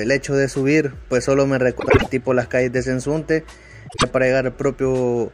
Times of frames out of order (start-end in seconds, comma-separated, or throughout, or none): 1.79-2.07, 3.88-4.04